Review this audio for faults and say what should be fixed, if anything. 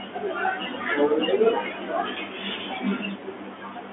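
Bluetooth CVSD headset codec, throughout the clip: the speech passes through a one-bit delta coder with an adapting step size, confining it to 200 Hz to 3.4 kHz with nothing above 3.7 kHz. S sounds turn scratchy, loud bright sounds distort, and granular hiss sits underneath. To prevent it, record over a wired microphone or a wideband headset link instead of the narrowband CVSD path.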